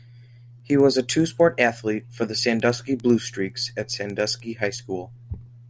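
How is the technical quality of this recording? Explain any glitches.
The quality is compromised by a steady ticking that runs through the whole speech recording.

Throughout, ticks recur ten times a second. This is a resampler restarted on every block: each 100 ms block was converted separately, likely from 24 kHz to 16 kHz, leaving a small error at every block edge.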